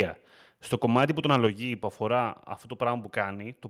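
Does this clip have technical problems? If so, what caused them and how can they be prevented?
Yes. Microphone overload, 1.33 to 1.47 s: the input gain was likely set too high, so peaks went about 1 dB past the converter's limit, their tops were cut off, and a crackling edge was added. Setting the microphone level lower before recording, with headroom for the loudest syllables, would prevent this.

Microphone volume stepped down, 1.47 s: right after that clipped stretch, the call software likely cut the device's input volume in a single step, so speech and background drop suddenly by about 5 dB. Starting with a correct input level, or turning off automatic microphone adjustment, would prevent the abrupt drop.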